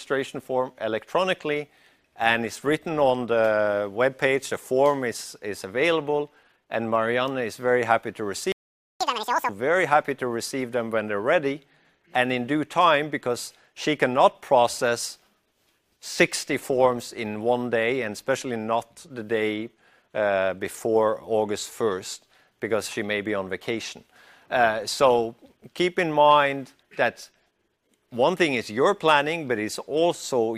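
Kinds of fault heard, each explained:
Playback stall: At 8.52 s the sound cuts out abruptly in mid-flow and the output stays completely silent for about 0.49 s, until 9.01 s. This is most likely the player running out of buffered data, or its audio thread being blocked, so nothing reached the output until it recovered. The sound then resumes from where it stopped.
Catch-up at higher speed: Right after the gap, from 9.01 s to 9.49 s, the audio rushes forward at double speed and sounds chipmunk-like, with its pitch raised by roughly ten semitones. It then snaps back to normal pitch and tempo. The player is resampling the backlog left by the stall so that it plays faster and wins back the lost half-second. Because it resamples rather than time-stretches, pitch rises along with speed.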